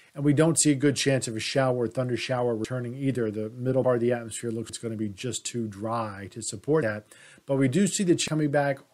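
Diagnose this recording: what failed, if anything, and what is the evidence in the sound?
Driver or buffer stage. Abrupt skips forward with no gap occur at 2.65 s and 3.84 s (roughly 0.1 s lost each), and at 4.69 s and 8.28 s (roughly 0.3 s each). These are likely dropped buffers (overrun): samples were overwritten before being read, and the surviving audio was butted together.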